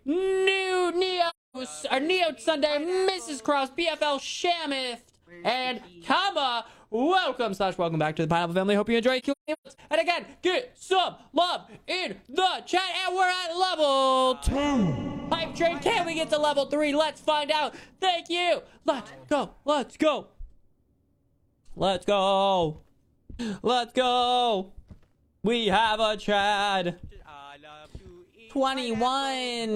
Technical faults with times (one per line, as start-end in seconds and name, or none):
1.29-1.57 AAC frame loss with muting
9.19-9.80 AAC frame loss with muting